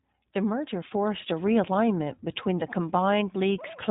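From start to finish the speech carries the sound of the iLBC codec, a narrowband VoIP coder. Each 20 ms frame has its excitation coded on its own, and at what sounds like about 15 kbps the damage is plainly audible: the sound is clear but slightly rough and synthetic. Nothing survives above 3.8 kHz, so a spectrogram shows a hard ceiling there across the whole clip, with frame-by-frame texture in the harmonics below.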